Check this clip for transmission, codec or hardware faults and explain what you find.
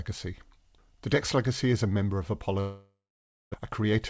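One transmission fault is audible, a long network dropout, heard over a G.722 call path whose band stops at 8 kHz.

Long network dropout, 2.60 to 3.56 s, just after "is a member of": the gap most likely comes from packets that stopped arriving. The receiver carries the last sound on as a fading buzz, then leaves about 570 ms of near-silence. When audio resumes, about 660 ms of speech is gone for good, and the timing has shifted by roughly a third of a second.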